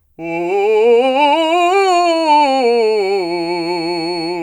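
A piece of music carries a thin, steady whistle at 4.4 kHz from 1.65 s through to the end at 4.42 s, sitting well below the music, roughly 20 dB down, and swelling and fading slowly in level. This is a feedback whistle, likely caused by a loudspeaker-to-microphone loop poised just at the edge of feedback, where a single high frequency keeps recirculating and sustaining itself without building into a runaway howl.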